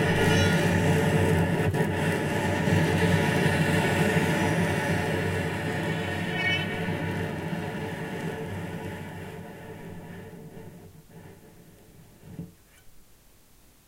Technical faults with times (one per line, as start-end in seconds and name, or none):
none